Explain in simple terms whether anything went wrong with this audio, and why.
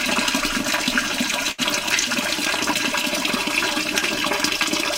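Two faults can be heard. The first, at 1.51 to 1.61 s, is a burst of packet loss. A short run of data never arrived, so the player held the last sound for about 66 ms and let it fade. When playback resumed, about 60 ms of audio had been skipped.

The second, from 2.52 to 2.69 s, is loose connector crackle. A poorly seated or dirty contact kept briefly breaking and reconnecting, chopping the signal into a short, irregular burst of scratchy crackling.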